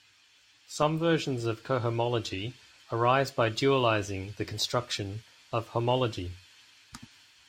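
Nothing technically wrong turns up anywhere in this bit of speech; it's a perfectly sound recording with no faults to point at.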